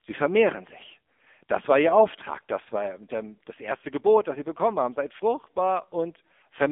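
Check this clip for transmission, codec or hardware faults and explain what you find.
One fault runs through the whole clip: the AMR narrowband mobile codec. Throughout, the speech is buzzy and synthetic, boxed into a phone band with nothing above 3.6 kHz. The heavy damage points to a low AMR-NB mode near 6.7 kbps, where a few pulses driving a vocal-tract model stand in for the real voice.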